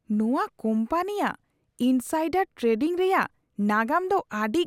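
No technical faults can be heard anywhere in the speech recording. Nothing interrupts or alters the audio at any point.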